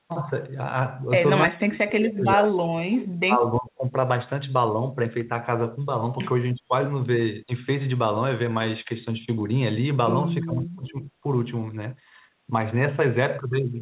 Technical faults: speech suppressed in double talk; echo leak

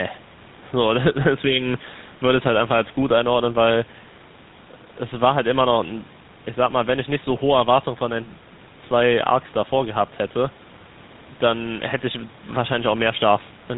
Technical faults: GSM full-rate codec

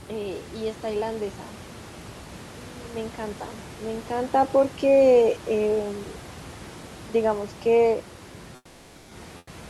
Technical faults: automatic gain falling; comfort noise in place of the background

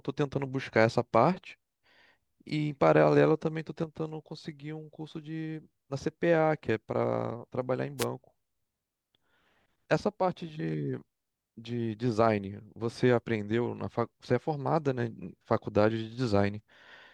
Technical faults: wireless microphone noise hit

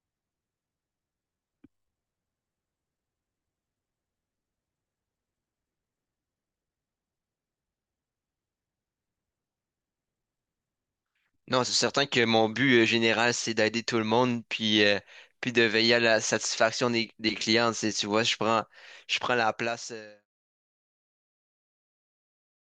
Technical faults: none

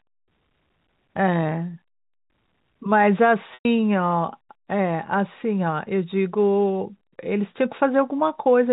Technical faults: packet loss with pitch repetition

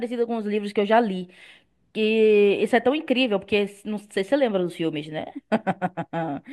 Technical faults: none

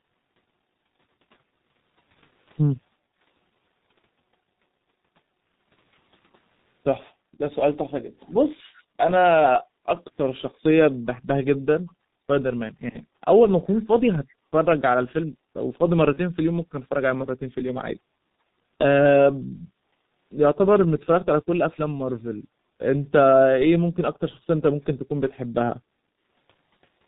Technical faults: G.723.1 codec; background gated by the echo canceller; VoIP packet loss concealed by the speech codec; echo leak

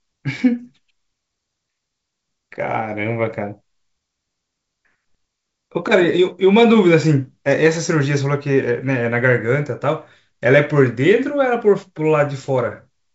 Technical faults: none

